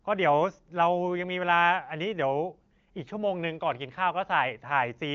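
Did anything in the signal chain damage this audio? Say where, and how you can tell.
No, nothing in the chain has damaged this speech. The audio stops near 7.1 kHz, which points to the AMR wideband (HD Voice) codec running at a high rate such as 23.05 kbit/s, and at that rate its effect on the speech is faint at most.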